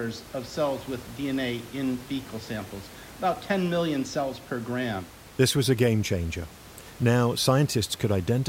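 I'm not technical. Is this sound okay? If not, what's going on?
Yes, this sounds fine, and the faint noise of the room in the background is just part of where it was recorded, nothing to worry about.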